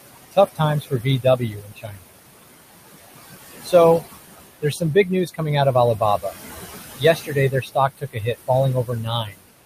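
Noise suppressor artifacts run throughout: the room noise, sitting about 12 dB below the speech, is pulled down by about 19 dB between phrases. Speech cut by the noise suppressor occurs at 0.31–2.09 s, 3.63–4.03 s, 4.62–5.41 s, 5.74–6.35 s, 6.96–8.5 s and 8.85–9.46 s. Quiet speech is mistaken for noise and dropped by up to about 22 dB, so the affected speech sounds swallowed, roughly a second's worth in the first stretch.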